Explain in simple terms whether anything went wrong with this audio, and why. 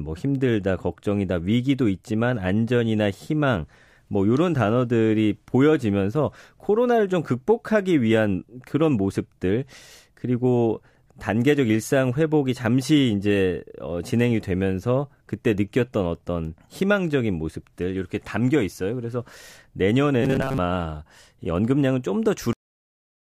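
Robotic sound from repeated short buffers, from 20.23 to 20.59 s: the speech turns into a stiff, metallic buzz at about 134 Hz. The likely cause is that new audio arrived too slowly, so the player kept repeating a tiny slice of about 7.5 ms, covering most of that stretch.

Cut-off end at 22.53 s: the speech stops abruptly mid-sound and drops straight into dead silence, with no natural fading away. The final chunks of audio were never written out or played, so the recording ends too early.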